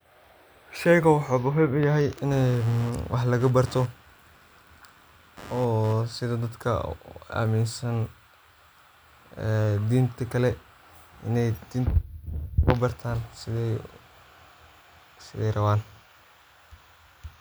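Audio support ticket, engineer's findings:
Computer activity noise, 2.32–6.23 s: chirpy buzz near 100 Hz pulse rate, roughly 20 dB under speech. CPU/GPU load disturbing shared audio ground. Spectrogram shows evenly spaced vertical striations.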